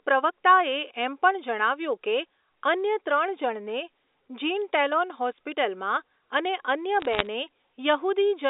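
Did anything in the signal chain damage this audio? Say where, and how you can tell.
Yes. From 7.01 to 7.27 s, a short burst of sharp ticks and crackle sits over speech that is not otherwise changed. These are bit errors on a digital phone line, arising at the transmission stage. In the G.711 stream, which still shows its usual 300 Hz to 3.7 kHz telephone band, a few bits in every thousand were flipped. Each flipped bit corrupts one logarithmic sample. Hits on sign or high-order bits throw that sample far off, producing the isolated clicks.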